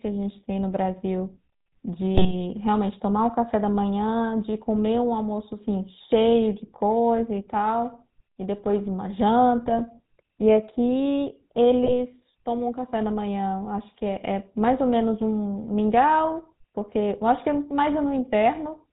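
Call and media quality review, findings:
GSM full-rate codec, throughout: buzzy, gravelly roughness, nothing above 4 kHz. The speech passes through a vocal-tract model excited by sparse regular pulses, which fits 13 kbps full-rate coding; the damage is plainly audible.

GSM bit errors at 2.15–2.34 s, 9.68–9.81 s and 11.84–11.93 s: brief squawks, pops and gargling. Corrupted filter, pitch or gain parameters distort the decoded frames, which points to a weak radio link with roughly 1–2% bit errors over a few frames each.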